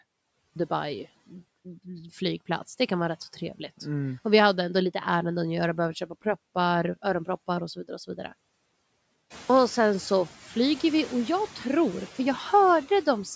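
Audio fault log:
Throughout: noise suppressor artifacts. The suppressor cuts the bands it judges to be steady noise by about 17 dB, frame by frame, so the background sinks between phrases and swells back under the speech.
0.46–0.56 s and 9.41–9.50 s: clipped start after a pause. The output path goes idle during silence and needs time to wake again, so about 99 ms and then about 85 ms of sound are lost. Speech snaps in abruptly, missing its onset, at the first entry and just before "sen så flyger vi".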